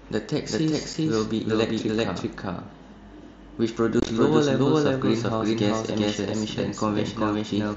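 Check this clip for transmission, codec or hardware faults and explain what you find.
Two faults are audible: a doubled audio track through the whole clip and unconcealed Bluetooth headset packet loss at two points, heard over an mSBC headset link whose 8 kHz wideband ceiling stays intact.

The doubled audio track runs from start to end. A second full-band copy trails about 0.4 s behind at roughly equal loudness, likely from the signal being captured twice along a slower path. Unlike an echo or reverb, it has no decay and no room colour.

The unconcealed Bluetooth headset packet loss sits at 0.93 s and from 4.00 to 4.09 s. Missing headset packets were replaced by silence or an idle pattern instead of being patched over. The first is a single 7.5 ms hole, which fits one lost packet. The second scatters about 60 ms of gaps over 90 ms, the longest 22.5 ms, giving a brief rough chop. The sharp, abrupt edges separate it from the soft band fluttering of the codec.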